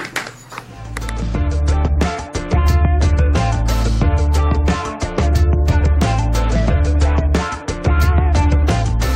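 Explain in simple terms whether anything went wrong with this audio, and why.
Nothing went wrong here.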